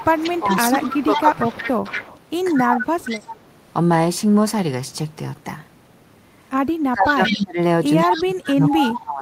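From 0.0 to 3.4 s, an echo leak, likely from a loudspeaker-side echo canceller letting its microphone pickup back through, adds a copy of the speech 178 ms late at about 10 dB down. Within that stretch, from 0.14 to 1.67 s and 2.53 to 3.07 s, speech suppressed in double talk likely occurs as the canceller ducks both its own talker and the loudspeaker echo while both sides talk. The speech dips by about 15 dB, then about 25 dB. The same suppression returns from 6.76 s to the end, dipping by about 25 dB. Within it, the echo leaks back at 7.06 to 7.45 s and 8.08 to 8.91 s, now only about 5 dB below the speech.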